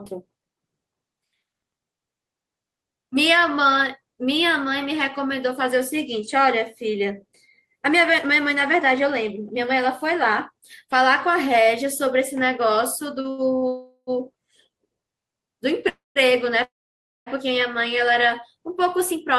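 Short stalls from a late packet come in a quick cluster at 13.21 to 13.27 s, 13.30 to 13.41 s and 13.56 to 13.65 s. Each time, the next packet wasn't there when it was due, so the jitter buffer ran dry and the receiver stretched the last sound for 30, 79 and 58 ms, with a faint buzzy hold. Playback then resumed from the same point, so nothing is lost but the sound hitches.

Call audio freezes follow at 13.68 to 14.10 s, 15.89 to 16.18 s and 16.63 to 17.29 s. Each was likely caused by packets held up in transit that left the jitter buffer empty. The last sound is drawn out as a fading buzz and then goes quiet, for about 60, 170 and 570 ms of near-silence within the 390, 266 and 629 ms gaps. The audio picks up where it stopped, so these gaps are added delay.

A jitter buffer speed-up runs from 18.69 to 19.35 s. Having built up more delay than it wants, the receiver trimmed small pitch-period slices many times in a row, cutting out around 40 ms in total. 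The speech plays at about 105% speed with its pitch unchanged and sounds slightly hurried.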